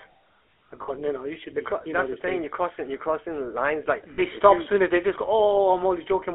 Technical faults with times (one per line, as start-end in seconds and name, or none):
0.00-6.34 GSM full-rate codec
0.82-0.90 lost GSM frames
4.14-4.22 lost GSM frames